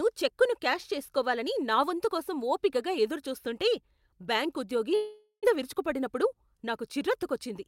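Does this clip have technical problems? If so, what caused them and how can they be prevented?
Yes. From 4.95 to 5.47 s the speech turns into a fading buzz, then about 90 ms of silence, and resumes with roughly 400 ms missing. This is likely a long network dropout, where the receiver can only stretch the last sound. A brief concealed loss would leave no silent gap. A more stable connection or redundant packets would prevent it.

From 6.05 to 6.79 s the speech runs at 105% speed while keeping its pitch. This is a jitter buffer speed-up, trimming about 40 ms to reduce built-up delay. A resampling error would shift the pitch too. Steadier packet arrival would prevent it.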